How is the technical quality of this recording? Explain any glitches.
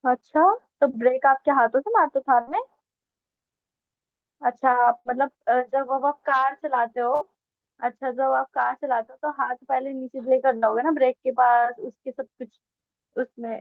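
The speech is marred by four brief dropouts, each a burst of packet loss. They fall at 2.41 to 2.50 s, 4.99 to 5.08 s, 7.15 to 7.24 s and 10.57 to 10.65 s. Each time, about 60 ms of audio never arrived in time. The receiver filled the hole for roughly 55 to 60 ms by extending the last sound and fading it. You hear a short held buzz or fading hiss, then a jump forward.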